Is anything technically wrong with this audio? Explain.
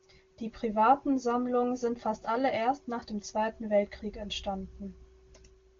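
No, nothing technically wrong can be heard here.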